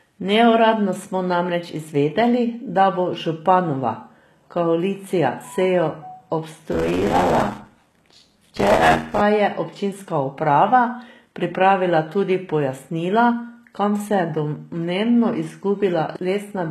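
From start to finish the treble sounds synthetic. The s sounds come out gritty and metallic, and nothing reaches above 12.3 kHz. The likely cause is HE-AAC compression at a rate that fits roughly 16 kbps. The codec keeps only the lower spectrum and fakes the top by copying lower bands upward under a coarse envelope. The rebuilt harmonics don't line up with the real ones across the crossover, which is why the damage is plainly audible.

From 6.71 to 9.21 s a robotic buzz at about 86 Hz rides on the speech. This is buffer tearing. The software filling a ring buffer and the hardware reading it have drifted until they cross inside every period. So a large share of each buffer, somewhere near 40 percent, replays audio from around 40 ms earlier, with hard joins at both edges. The buzz rate fits a 512-sample buffer.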